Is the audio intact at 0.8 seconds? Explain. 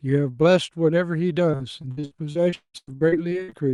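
Yes, the audio is intact at 0.8 seconds, with no fault at that moment.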